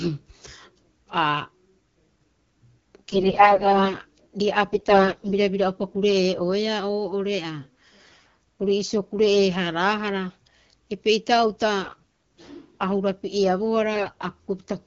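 Weak-link AMR bit errors corrupt the lightly protected frame bits at 3.09–3.96 s, 4.72–5.30 s, 8.03–8.27 s, 11.85–12.07 s and 13.94–14.13 s, misplacing excitation pulses and skewing pitch, gain and spectral detail. The speech keeps its pitch and level but turns hoarse, scratchy and gargly.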